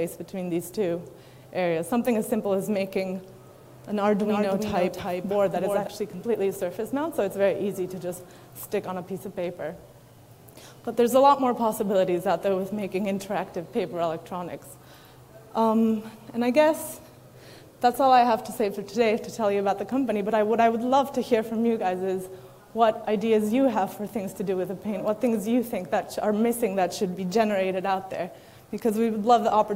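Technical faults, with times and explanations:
4.19 to 5.87 s, doubled audio track: likely a slower path or misaligned edit mixed in a dry copy about 5 dB down, roughly 300 ms late, cutting in and out abruptly.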